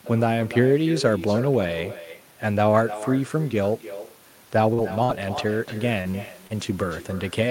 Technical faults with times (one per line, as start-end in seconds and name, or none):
0.00-7.51 echo with no canceller
4.73-4.80 short concealed packet loss
5.04-5.11 burst of packet loss
6.01-6.15 short concealed packet loss
6.47-6.54 short concealed packet loss